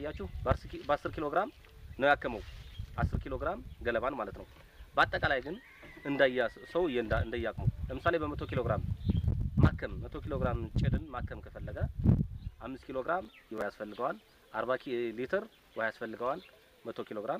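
Processor overload crackle from 13.25 to 13.62 s: about ten skipped buffers of roughly 5 ms tear the audio, showing as hard-edged waveform gaps and vertical broadband spectrogram streaks.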